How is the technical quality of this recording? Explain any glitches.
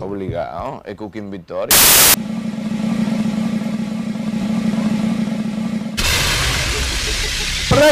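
The recording has one clear glitch, a burst of harsh noise from 1.71 to 2.14 s. It comes from samples built from the wrong bytes: for that stretch the reader assembled each sample from mismatched bytes, so the rapidly fluctuating low-order bits landed in the most significant positions. The result is loud, harsh broadband noise. A spectrogram shows a flat wall of energy across all frequencies, and the waveform jumps to dense hash.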